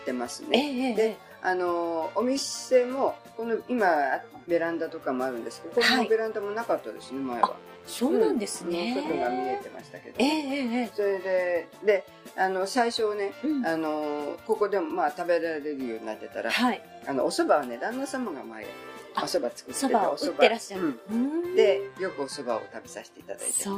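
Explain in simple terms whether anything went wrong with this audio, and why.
Nothing went wrong with this audio, because no fault can be heard anywhere in it.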